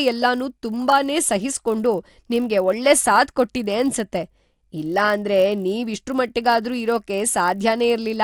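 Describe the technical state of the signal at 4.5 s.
At 4.5 s you're hearing the resampler restarted on every block, and it runs through the whole clip. The 24 kHz to 48 kHz conversion treats each 20 ms block in isolation, so every block edge gets a small error, giving a 50 Hz buzz under the speech.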